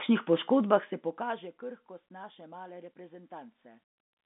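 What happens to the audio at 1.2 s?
Nothing goes wrong at 1.2 s; the speech passes through that moment intact, with no dropout, click or sudden jump in level.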